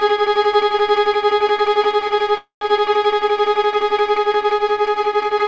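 Delayed packets likely emptied the jitter buffer: a call audio freeze from 2.38 to 2.62 s, fading buzz or hiss then 120 ms silence, sound resuming intact.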